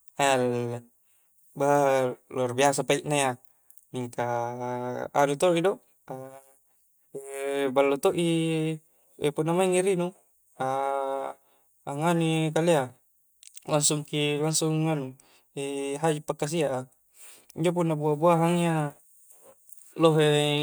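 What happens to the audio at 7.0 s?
Nothing goes wrong at 7.0 s: the speech carries on cleanly through that moment, with no dropout, click, glitch or other fault to be heard.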